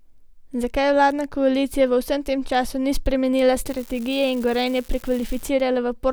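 From 3.66 to 5.48 s, after "tem času ni spremenila", an unreliable data bit throws equal spikes of about -25 dBFS, a fizzing crackle that continues through pauses, unlike level-dependent distortion.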